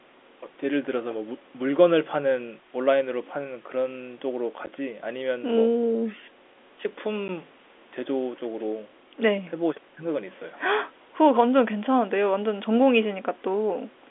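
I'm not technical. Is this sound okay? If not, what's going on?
No. There are two tiny dropouts in this speech, at 4.66 s and 7.28 s. Each is a gap of about 10 ms. This is packet loss filled with silence. The sound travels over the call in small chunks. A chunk went missing each time, and the receiving end played nothing in its place. The sound stops and starts abruptly, so you may hear a faint click or tick. The narrow telephone sound itself comes from the phone line.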